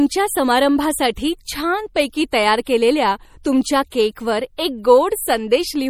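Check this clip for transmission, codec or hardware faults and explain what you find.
Two faults are audible in this speech recording: codec damage throughout, and two pre-echo events.

MP3 compression, throughout: the damage is plainly audible and most likely comes from MP3 encoding at a low bitrate, around 48 kbps. Short of bits, the encoder drops weak frequency lines that flicker between frames, giving a watery, swirly texture and smeared consonants. Nothing is present above 19.8 kHz.

Pre-echo at 2.65 s, just before "केलेल्या तुमच्या केकवर एक", and at 3.90 s, between "तयार केलेल्या तुमच्या" and "केकवर एक": the codec spreads quantisation noise evenly across each block, so noise meant for the louder onset leaks into the quiet before it. The result is a brief hiss of about 18 to 19 ms, and the attack that follows sounds softened.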